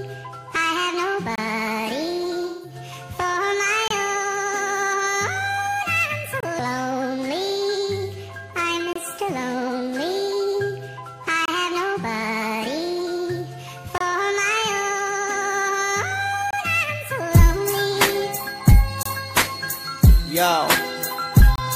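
Gaps between chunks punch hard-edged 25 ms silences every 2.5 s, from 1.36 s to 21.56 s. Their strict regularity separates them from random dropouts. From 2.47 to 2.75 s, AAC frame loss with concealment leaves a smeared, noisy patch rather than clean silence, consistent with about four lost frames.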